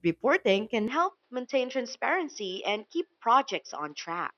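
Speech that turns duller and a little quieter from 0.88 s to the end, with nothing above 5.8 kHz and faint new background noise, and no gap at the change. The likely cause is the input switched to a poorer device mid-recording.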